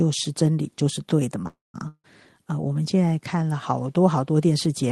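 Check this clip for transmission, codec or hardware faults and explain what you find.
Two transmission faults sit close together in this speech, both about a third of the way in.

A call audio freeze runs from 1.47 to 1.76 s. Packets were likely held up in transit, so the jitter buffer ran dry and the receiver stretched the last sound into a fading buzz that settles into roughly 170 ms of silence. When the packets turn up, the speech resumes exactly where it stopped, so nothing is lost, but the rest of the clip now runs about 266 ms late.

A long network dropout follows from 1.88 to 2.06 s. Here the audio likely never arrived at all. The receiver again bridges the hole with a decaying hiss, about 50 ms of it fully silent, and then jumps ahead. Roughly 160 ms of speech is simply missing, so the sound comes back partway on rather than picking up where it broke off.

The call codec's top end stops near 12 kHz, which fits Opus on a call link.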